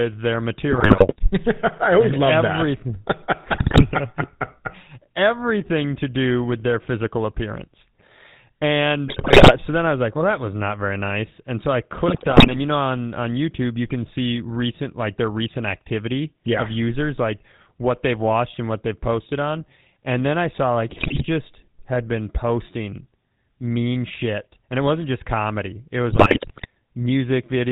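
Throughout, the speech carries the buzzy, gravelly roughness of the GSM full-rate codec, which fits 13 kbps coding. The vocal tract is modelled and driven by a coarse pulse excitation, so every syllable has a steady grating texture, and nothing above 4 kHz survives. Because the roughness is constant rather than bursty, it comes from the codec itself and not from the channel.

On top of that, GSM bit errors break through in six short bursts: 0.70 to 1.31 s, 3.52 to 3.84 s, 9.08 to 9.55 s just before "so then I was", 12.08 to 12.58 s between "so I" and "you know on on", 20.90 to 21.24 s after "then I saw like", and 26.10 to 26.66 s. Corrupted filter, pitch and gain values warp the spectrum and spike the level, producing squawks, pops and gargling. Unlike packet loss, these bursts leave no gaps or smoothed-over silence. The sound turns into distorted garbage instead.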